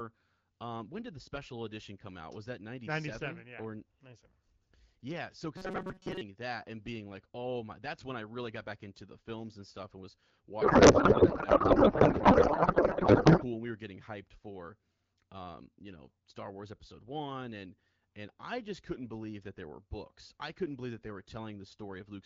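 From 5.57 to 6.21 s the speech collapses into a rigid, metallic buzz at 188 Hz. This is robotic sound from repeated short buffers, likely caused by audio arriving too slowly, so the receiver loops its last snippet of roughly 5.3 ms, with most of this stretch made of repeats. The loop imposes a fixed pitch that only loosely tracks the syllables. On a spectrogram, evenly spaced horizontal harmonics of 188 Hz replace the natural pitch contours. The waveform shows a near-identical short cycle repeating over and over.

From 10.61 to 13.44 s the speech is replaced by garbled noise and warbling tones that barely follow the talker. This is a codec payload misread. The stream is AMR-WB at 12.65 kbit/s, and octet-aligned frames are being decoded as if they were bandwidth-efficient. Every field lands in the wrong place, so the decoder builds nonsense from plausible-looking parameters. The spectrogram loses its formant and harmonic structure and shows smeared, chaotic energy across the band up to about 7 kHz. 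The waveform envelope jumps erratically and no longer matches the syllables.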